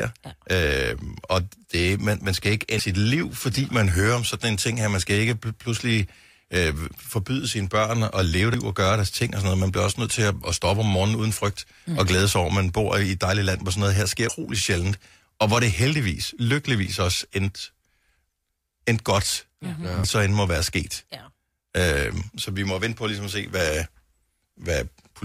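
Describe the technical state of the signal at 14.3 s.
At 14.29 s there is audio missing between chunks. The recording was likely made in 6-second blocks, and during the handover from one block to the next about a third of a second of speech was dropped. The two sides are butted together with no gap of silence, so the speech jumps forward abruptly at that point.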